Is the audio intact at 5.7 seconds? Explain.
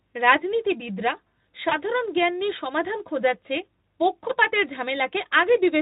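Yes, the speech at 5.7 s is intact, coming through the Speex codec with no dropout, glitch or other fault at that moment.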